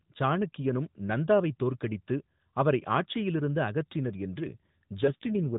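At 5.02 s, right through to the end of the clip, there's an AMR rate drop: the narrowband mobile link shifts down, likely to spend bits on error protection. The speech turns rougher and buzzier, which fits a fall from around 12.2 to 4.75 kbps, with no gap and the band unchanged.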